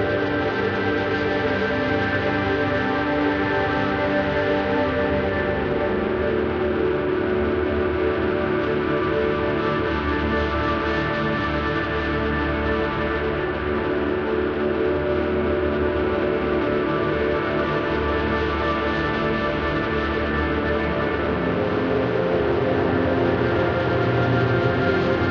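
No technical faults are audible.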